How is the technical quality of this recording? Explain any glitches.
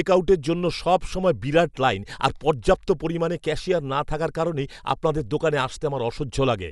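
The technical quality is poor, with plainly audible codec damage across the whole speech clip.

Dolby Digital compression, throughout, likely from a low-bitrate encode consistent with 64 kbps: nothing survives above 11.4 kHz, and noise-filled bands leave the speech dull and rough.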